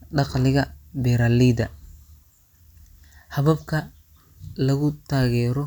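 No technical faults can be heard anywhere in the clip.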